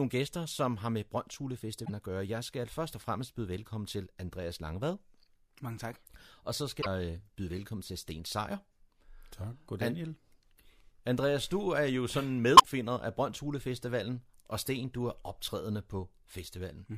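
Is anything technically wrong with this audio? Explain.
Yes. The speech has three bursts of damaged data in the compressed stream. They fall at 1.82 to 1.90 s, just before "at gøre", at 6.78 to 6.86 s, and at 12.55 to 12.64 s, right after "du er jo sådan". Each lasts about 80 ms. Part of the encoded data is corrupt there. The decoder misreads those frames, loses sync and hunts for the next valid header. Each event sounds like a short chirp, squawk, click or hole.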